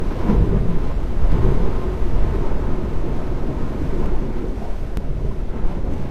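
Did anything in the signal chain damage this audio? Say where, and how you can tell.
Yes. From 1.32 to 4.06 s the sound is joined by a doubled audio track: a second, full-band copy trailing the original by about a second and sitting roughly 5 dB lower. It carries no reverberant tail or room colouring, and it switches in and out abruptly at those edges rather than fading. That points to the driver or buffer stage, most likely the same signal being captured again through a slower second path and summed back in.

At 4.97 to 5.01 s there is a small skip where about 36 ms of sound is missing and the waveform jumps discontinuously. This is an overlap between stream segments at the playback stage. The stream is cut into 6-second segments, and where two segments' time stamps claim the same stretch, the player trims that span away even though the audio was not actually duplicated, leaving a gap.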